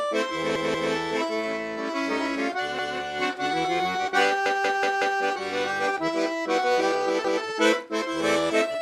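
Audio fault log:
0.56–0.93 s: repeated buffer. New audio missed its deadline, so the device replayed its last block, which fits an 8192-sample buffer of about 186 ms. That piece is heard three times, with a hard join at each repeat, giving a short stutter.
2.79–2.97 s: repeated buffer. The same stall, with one extra play, so the block sounds twice.
4.46–5.20 s: repeated buffer. The longest stall: the block loops five times in total.
7.25–7.43 s: repeated buffer. One extra play, so the block sounds twice. After each stall the sound resumes where it left off, with nothing lost, only delayed.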